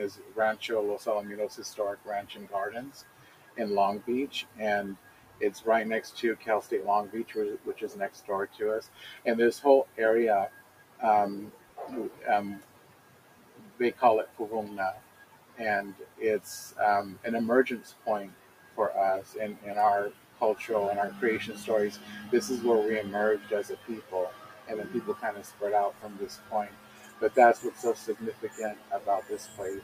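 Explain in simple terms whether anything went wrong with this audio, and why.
A noise suppressor applied to music or sounds stays on throughout. It treats steady tones and fading tails as noise, so the level pumps and thins.

Sound cut by the noise suppressor is clearest at 0.15–0.37, 1.96–5.41, 6.36–16.2, 17.16–20.41 and 23.39–29.6 s, where held sounds sink and decays stop early.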